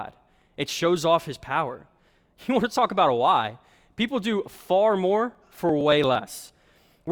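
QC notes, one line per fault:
5.35–7.07 s: periodic USB or driver dropouts. About 10 ms of speech skipped every 0.115 s, some fifteen times. Regular ticks from a repeatedly blocked driver.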